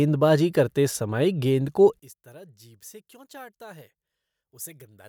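One channel inverted, from 1.99 s to the end at 5.09 s: the speech drops by about 24 dB and turns faint. The centred voice and its low end nearly disappear, leaving only a weak residue. The likely cause is one stereo channel with reversed polarity. When the two channels are summed to mono, the material they share cancels, and only the small difference between them remains audible.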